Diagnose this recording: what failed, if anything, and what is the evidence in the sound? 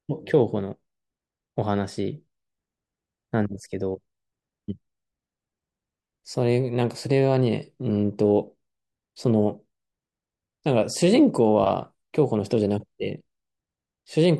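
Nothing failed, and the sound gives no evidence of a fault at any stage of this speech recording.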